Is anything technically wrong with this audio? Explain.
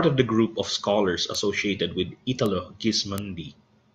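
Yes, the speech carries three bit error spikes, at 1.35, 2.46 and 3.18 s. Each time a single bit flipped in memory or on a digital link, throwing one sample off by a power of two before it returned, giving a brief broadband tick unrelated to the voice, peaking about −11, −11 and −5 dBFS.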